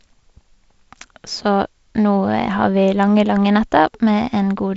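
No faults in this speech clip; it is carried over G.722 wideband telephone coding at 48 kbit/s, with content up to about 7.7 kHz and only light coding noise from the reduced bit allocation.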